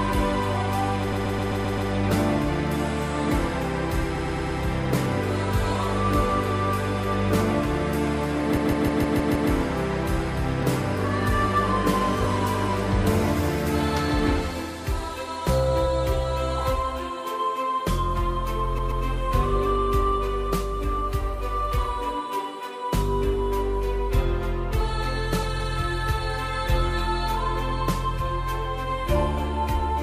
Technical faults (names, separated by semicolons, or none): repeated frames